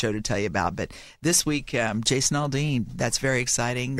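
Speech, with periodic USB or driver dropouts from 0.18 to 3.93 s. A tick sounds every 0.25 s, about fifteen in all. Each is a tiny skip, a fraction of a millisecond of audio lost. A background task stalling the bus or driver causes this.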